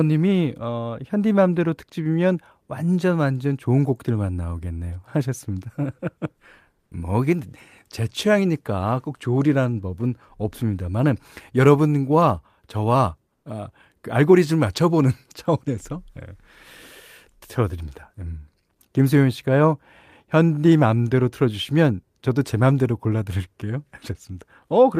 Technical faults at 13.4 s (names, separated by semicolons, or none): comfort noise in place of the background